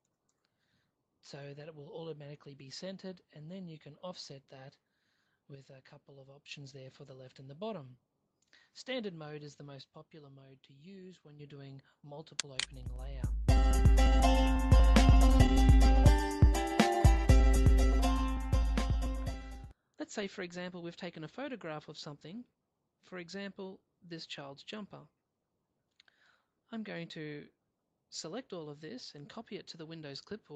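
From 5.55 to 6.51 s and again from 9.81 to 11.40 s, the level drops abruptly by about 6 dB. This is most likely one channel dropping out before the mono sum, and the fixed 6 dB step separates it from a gradual fade or a gain change. At 13.29 s, playback skips ahead: roughly a second of audio is gone, and the two sides join with no audible gap. That clean join distinguishes it from a dropout, which leaves silence or a concealment fill. Then jitter buffer speed-up follows. From 13.48 to 15.86 s the audio runs at 107% speed, and from 17.14 to 21.08 s at 103%, as short pitch-period pieces are cut to drain the excess buffer. Pitch stays the same throughout, unlike resampling, and the first passage sounds hurried. The first stretch loses about 0.2 s and the second about 0.15 s. Through the whole clip the Opus call path adds coding noise and limits the top end, consistent with a bandwidth near 12 kHz.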